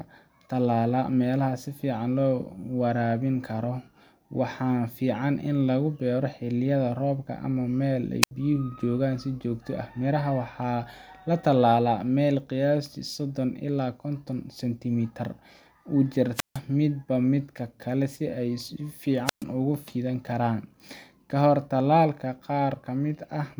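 At 8.22, 16.34 and 19.25 s, the speech hits a wireless microphone squelch dropout. The radio link fades and the receiver's squelch shuts the output. Hiss swells, then near silence lasts about 75, 155 and 125 ms. The speech returns.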